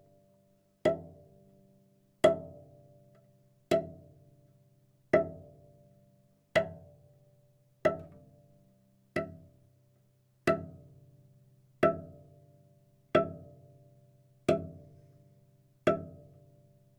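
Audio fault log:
No faults found in this recording of sounds.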